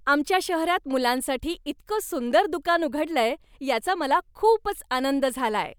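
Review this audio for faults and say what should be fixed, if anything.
Nothing stood out on listening to this speech clip, so there is nothing to fix.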